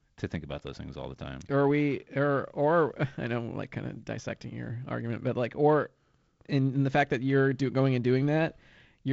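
No technical faults are audible.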